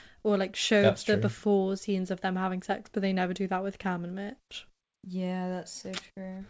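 Nothing goes wrong anywhere in this speech. It comes across a call link that sounds like a wideband codec such as G.722, and the audio stopping at 8 kHz is simply how that link carries it rather than a fault.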